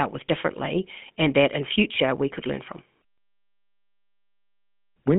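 Throughout, the speech has a plainly audible buzzy, gravelly roughness, with a thin telephone-band quality and nothing above 3.5 kHz. This is the GSM full-rate codec, fitting a 13 kbps stream. It rebuilds the voice from a vocal-tract model driven by sparse, regularly spaced pulses.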